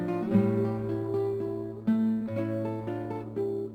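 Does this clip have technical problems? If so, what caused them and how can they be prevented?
No, no technical faults heard.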